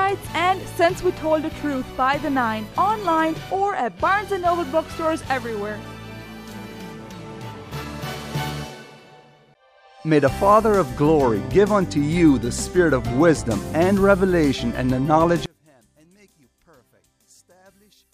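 From 15.46 s to the end at 18.13 s the sound collapses by about 35 dB, leaving a faint residue. This is likely one channel inverted, so the shared centre cancels on mono summing, unlike a dropout, where nothing at all would remain.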